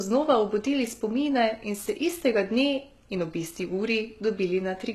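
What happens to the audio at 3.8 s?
At 3.8 s, as throughout, the speech sounds dull with nothing above 12.3 kHz, likely low-bitrate audio saved at a high bitrate, as a very low-rate encode re-saved as high-rate MP3.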